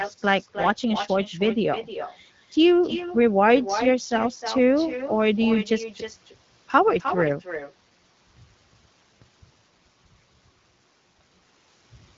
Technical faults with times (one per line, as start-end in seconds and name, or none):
0.00-12.18 echo with no canceller